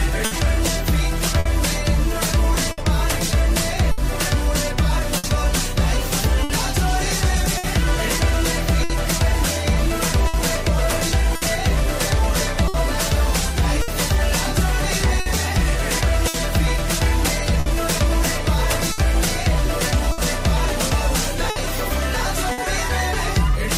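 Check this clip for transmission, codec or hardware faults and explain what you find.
Two transmission faults are present: clock drift and scattered short gaps.

Clock drift between sender and receiver runs through the whole clip. The sender's clock is about 5% slow, so the jitter buffer keeps draining and the receiver stretches or repeats short pieces, giving small, unevenly spaced timing hiccups throughout.

Scattered short gaps appear from 0.25 s to 22.61 s. About twenty packets went missing or arrived late, and the receiver filled each by continuing the previous sound. That adds up to roughly a second in total, with the longest gap around 70 ms, heard as brief ticks, smears and hiccups.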